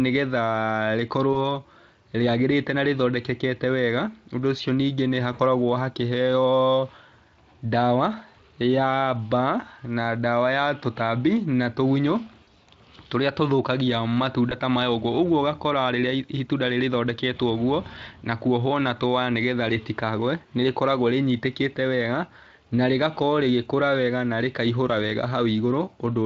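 VoIP packet loss concealed by the speech codec occurs at 1.33, 5.33, 12.43 and 14.49 s (before "ta maya"). The decoder extrapolates the missing 20 to 60 ms into brief, fading, buzzy or noisy smears.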